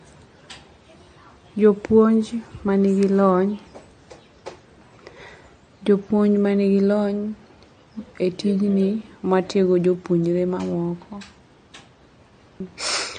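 Throughout this speech recording the sound has a watery, swirling quality, with metallic chirps on the s sounds and softened consonant attacks, and nothing is heard above about 9.1 kHz. The likely cause is MP3 compression at a low bitrate, consistent with roughly 40 kbps: the encoder cuts the treble at a fixed frequency and drops weak frequency lines that flicker on and off between frames, producing the swirl and smeared onsets.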